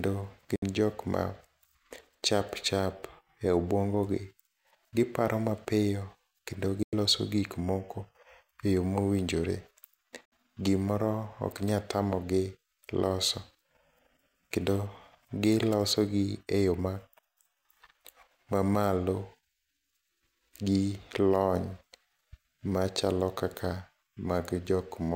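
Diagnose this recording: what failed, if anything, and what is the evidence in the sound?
The digital broadcast reception failed. The receiver muted on bad frames, a digital broadcast dropout. The speech fades to silence within about 3 ms at 0.56–0.63 s, 6.83–6.93 s and 10.25–10.33 s. The 64 and 96 ms holes fit two or three lost 32 ms frames, and that speech is gone.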